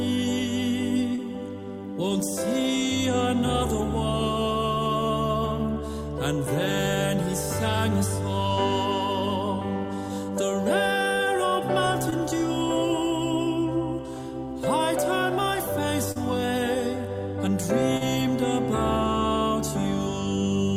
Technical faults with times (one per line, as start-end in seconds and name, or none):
1.15-1.20 short concealed packet loss
12.10-12.14 short concealed packet loss
16.12-16.17 short concealed packet loss
17.97-18.02 short concealed packet loss